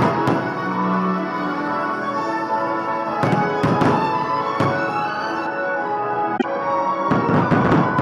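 From 5.47 s to the end, de-emphasis is applied wrongly. An unneeded treble cut slopes down, about 14 dB at 10 kHz. The sound turns dull and muffled. At 6.36 to 6.44 s, damaged data in the compressed stream makes the decoder lose sync.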